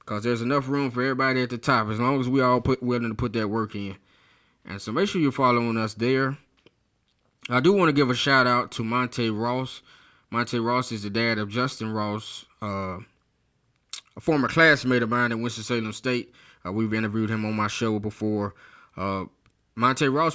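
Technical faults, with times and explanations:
No technical faults can be heard anywhere in this recording.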